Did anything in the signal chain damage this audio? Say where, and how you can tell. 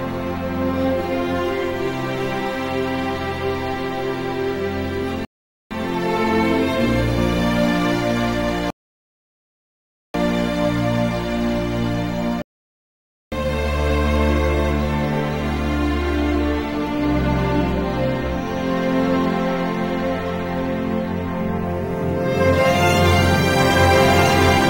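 Yes. Two rebuffering stalls point to the network delivery stage. The audio drops to silence from 5.25 to 5.71 s (0.46 s) and again from 8.70 to 10.14 s (1.44 s). Each time it picks up exactly where it left off, with nothing skipped. The downloaded audio ran out, the player waited for more to arrive, and then continued. The content is intact, but each gap adds time to the clip.

A playback stall follows at the player's output stage. The sound halts mid-flow at 12.42 s and stays silent for about 0.9 s, until 13.32 s, before continuing. The likely cause is the playback thread being blocked, or its buffer briefly underrunning, so the output went quiet until the player recovered. It is heard as a single sharp interruption rather than a fade.

A doubled audio track appears at the editing or capture-routing stage. From 22.95 s to the end, a second full-band copy of the same audio runs roughly one and a half seconds behind the first, at about the same level. 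The copy has no reverberant tail or room colouring, and it starts abruptly. This most likely comes from two out-of-step copies left in an edit, or the signal being captured again by a slower path.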